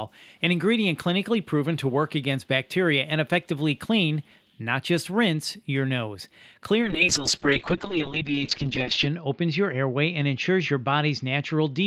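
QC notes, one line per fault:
4.21–4.56 s, echo leak: a very faint delayed copy of the speech, trailing the original by about 0.16 s, slips in underneath for roughly a third of a second. The likely cause is a far end playing the call over a loudspeaker, where the echo canceller failed to fully suppress what its microphone picked up and returned that residue.
6.82 s to the end, call bitrate drop: the speech turns coarse and muffled as the audible bandwidth narrows from about 20 kHz to about 8 kHz, and it does not recover before the clip ends. The worst stretch lasts about 2.24 s. The sound suggests the encoder was pushed from around 32 kbps down to roughly 6 kbps after the bandwidth estimate fell. At that rate, Opus quantises more roughly and discards the upper band, which causes the watery, dull quality.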